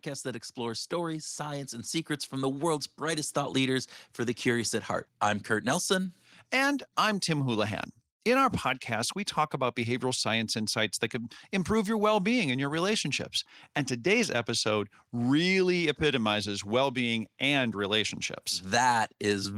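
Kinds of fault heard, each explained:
Automatic gain rising: the speech and the background behind it swell together, growing steadily louder by about 8 dB from 0.23 s to 4.48 s. The automatic gain control judged the input too quiet and raised its gain slowly, lifting everything at once.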